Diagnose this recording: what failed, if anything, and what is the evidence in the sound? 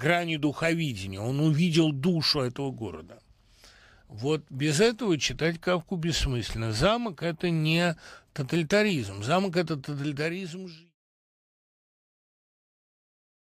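Nothing in the signal chain has failed: the speech holds a stable, continuous level until a deliberate fade-out that begins around 9.5 s and reaches silence at 10.96 s, tapering evenly with no click or hard edge.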